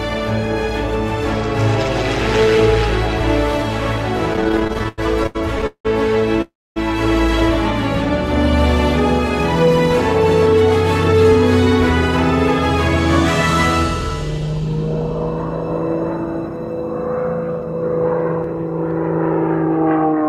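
From 4.33 to 6.40 s the audio shows repeated stalls (stutter): the jitter buffer ran dry 20 times, and the receiver stretched the last sound to fill 521 ms in all, a quarter of that span, with the longest hold 181 ms. Many short catches, not one long stop, set it apart from a freeze.

Right after, from 6.42 to 6.78 s, comes a call audio freeze. The last sound is held and fades across a 343 ms gap, 260 ms of it silence, before the audio resumes where it stopped. The likely cause is packets delayed in transit. Nothing is lost, but the delay grows by 343 ms in one unbroken pause rather than a chain of stutters.

Two jitter buffer speed-ups follow. From 16.42 to 16.79 s the audio runs at 109% speed with roughly 40 ms removed, and from 19.65 s to the end it runs at 110% with about 70 ms removed. Both passages sound hurried, yet pitch stays the same, which distinguishes this from a sample-rate error.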